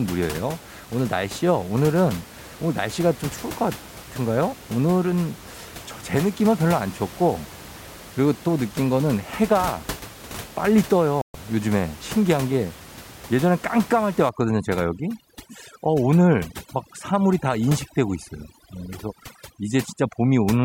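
At 11.22 s the sound disappears for 128 ms until 11.35 s, a digital broadcast dropout: the receiver lost valid frames, which fits four lost frames, and muted until good ones returned. On a waveform it shows as a flat gap; on a spectrogram, a blank vertical stripe.

From 14.29 s to the end, overdone noise removal takes hold. The room noise, about 17 dB below the speech, is suppressed band by band, breaking into twinkling, warbling specks. On a spectrogram the background becomes scattered isolated dots with holes between them.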